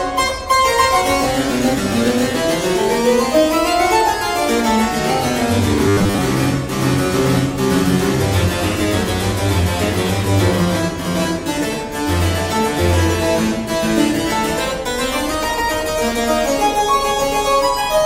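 From 5.88 to 6.18 s the sound turns into a rigid, metallic buzz pitched at 100 Hz, which is robotic sound from repeated short buffers. Audio is likely arriving too seldom, so the last 10 ms fragment is replayed in place of most of the real signal for that stretch.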